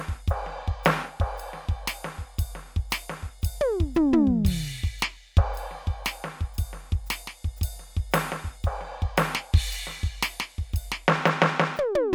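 No audible technical faults.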